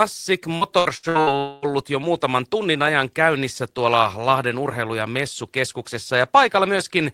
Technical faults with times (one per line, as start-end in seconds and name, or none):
0.55-1.30 repeated packet loss (robotic sound)
1.39-1.65 long network dropout